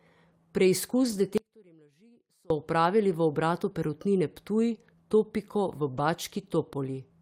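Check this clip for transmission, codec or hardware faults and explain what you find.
Three faults affect this speech: two short stretches of lost packets rebuilt from error correction, and one longer audio dropout to a faint residue.

From 1.03 to 1.21 s and again from 5.93 to 5.99 s, the speech turns briefly rough and grainy but never breaks. Lost packets were replaced by the low-bitrate copies carried in the following packets, which fits about five lost packets in the first spot and two in the second. Unlike a dropout, there is no gap.

From 1.38 to 2.50 s, a little over a second, the speech drops abruptly to a faint leak around 30 dB below its normal level, then snaps back. The likely cause is a break upstream while the rest of the path stayed live. The hard edges and the residue set it apart from a natural pause or fade.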